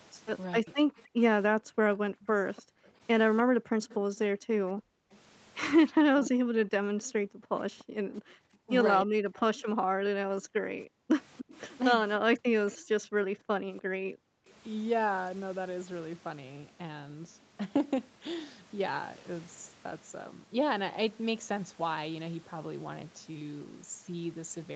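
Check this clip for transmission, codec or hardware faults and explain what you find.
Three echo-canceller faults recur through this speech, all heard against a call path band-limited to 8 kHz.

Speech suppressed in double talk, 0.61–0.69 s and 6.05–12.67 s: the voice dips by up to about 40 dB in pieces, likely because the canceller ducked both talkers. Unlike gating, the speech itself vanishes.

Echo leak, 0.98–5.16 s, 7.0–7.84 s and 11.37–14.53 s: a faint copy trails the voice by 295 ms, likely residual loudspeaker pickup. A repeated voice sets it apart from reverberation.

Background gated by the echo canceller, 1.07–5.11 s, 6.78–10.65 s and 12.95–14.47 s: room sound drops by about 40 dB while the loudspeaker plays, then returns.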